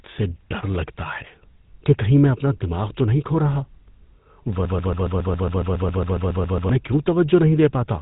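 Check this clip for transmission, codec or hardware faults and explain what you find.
Two faults are present: a codec artefact across the whole clip and a repeating loop near the end.

GSM full-rate codec, throughout. The speech has a buzzy, gravelly roughness that is plainly audible. The codec models the vocal tract and drives it with a coarse pulse train, discarding most of the excitation detail. That gives the grainy texture. Nothing is heard above about 3.8 kHz, so sibilants sound dull and clipped. The sound fits the 13 kbps GSM full-rate codec.

Broken-record loop, from 4.65 s to 6.69 s. A fragment of about 0.14 s repeats exactly, back to back, around fifteen times. It gives a rapid stutter with no forward progress. The likely cause is a stall in the player, encoder or stream that kept resending its last buffered piece. The speech that belonged in those two seconds is lost.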